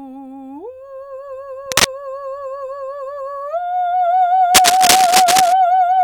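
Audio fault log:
1.66 to 1.85 s: cable scratch noise. A brief burst of dense, uneven rustling sits a little above the music. A worn cable or connector being moved likely causes the contact resistance to flicker.
4.54 to 5.53 s: cable scratch noise. Longer scratching, about as loud as the music, again likely from a disturbed, worn contact.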